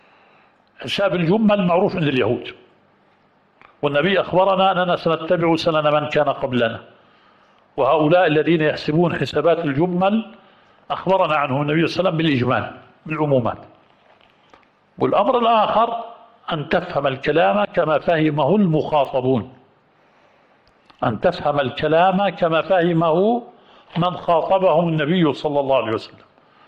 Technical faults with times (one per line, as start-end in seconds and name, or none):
19.05 bit error spike